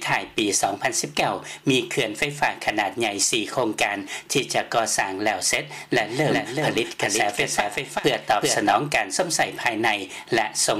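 From 6.01 to 8.76 s, a dry copy trails by roughly 400 ms, about 5 dB quieter, then cuts off abruptly: a doubled audio track, likely from a second, slower capture.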